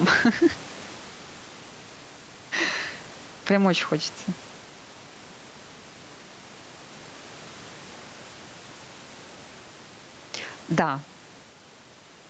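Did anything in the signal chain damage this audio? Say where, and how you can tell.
Yes. Gain pumping runs through the whole speech clip. The likely cause is input gain set far too high at the microphone stage, with a fast limiter or compressor in the call processing clamping each loud syllable. The gain swings by roughly 10 dB. That leaves loud and quiet passages squeezed together and the speech sounding flattened, on top of the call path's 8 kHz band limit.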